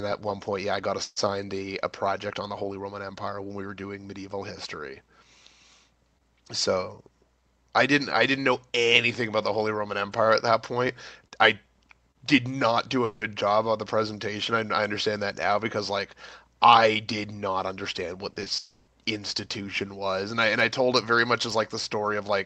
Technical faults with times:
13.04-13.22 long network dropout
18.30-18.51 repeated packet loss (robotic sound)
18.57-18.88 long network dropout

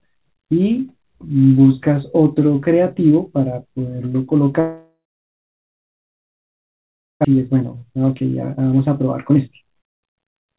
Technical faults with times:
4.60-7.27 long network dropout
7.34-10.58 jitter buffer speed-up

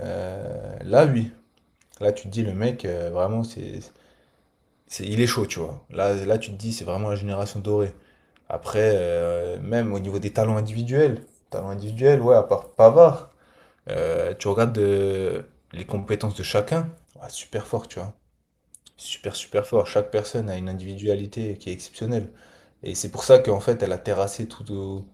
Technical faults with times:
11.93-12.03 short stall from a late packet
14.62-14.85 jitter buffer speed-up
15.99-16.05 short stall from a late packet

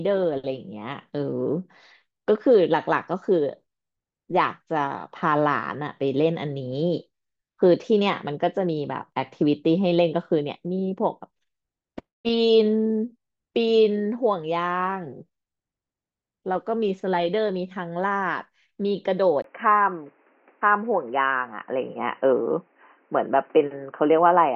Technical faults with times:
19.42-24.55 input switched to a poorer device

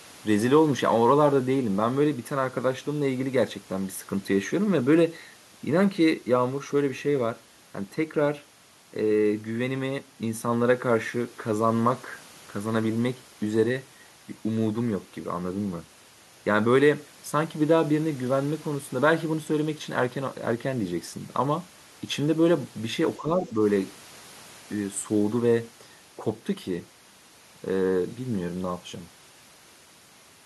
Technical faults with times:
23.19-23.59 speech suppressed in double talk

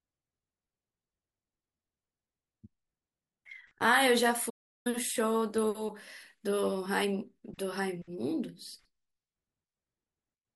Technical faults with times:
4.49-4.87 playback stall

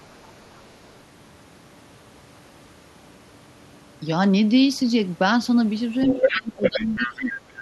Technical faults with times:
0.02-0.70 other side's voice leaking through
6.06-7.15 other side's voice leaking through
6.14-7.32 speech suppressed in double talk

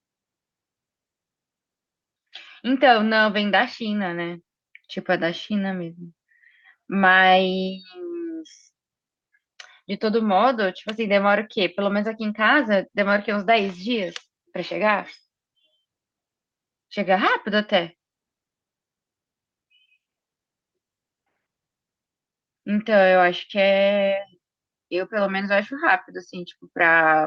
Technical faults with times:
none

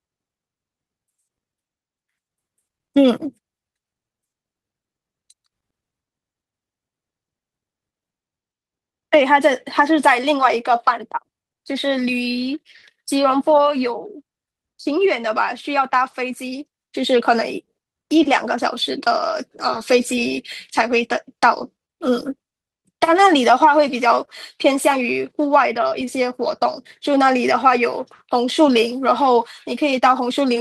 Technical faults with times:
none

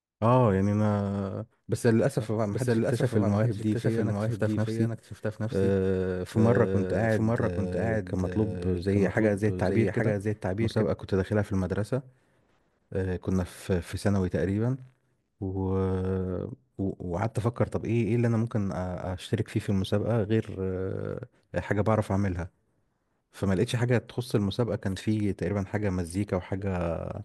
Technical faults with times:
2.19-10.85 doubled audio track

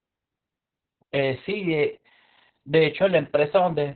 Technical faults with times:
0.00-3.95 Opus voice compression

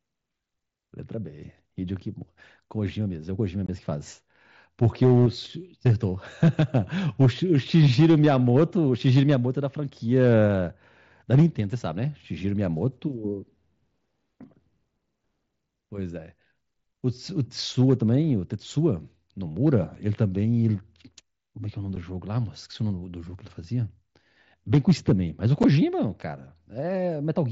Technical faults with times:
3.66-3.69 unconcealed Bluetooth headset packet loss
19.95 unconcealed Bluetooth headset packet loss
21.96 unconcealed Bluetooth headset packet loss
25.63 unconcealed Bluetooth headset packet loss

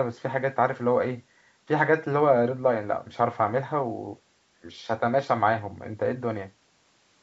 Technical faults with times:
none

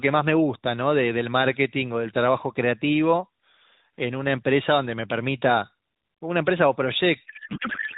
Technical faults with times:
7.26-7.97 codec payload misread

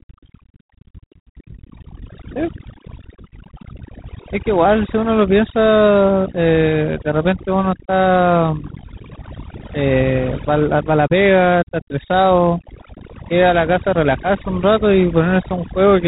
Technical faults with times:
0.00-16.07 overdone noise removal
0.00-16.07 G.726 ADPCM

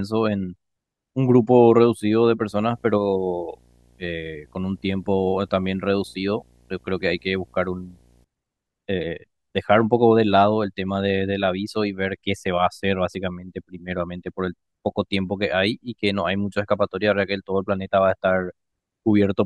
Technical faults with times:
2.48-8.24 video or display buzz

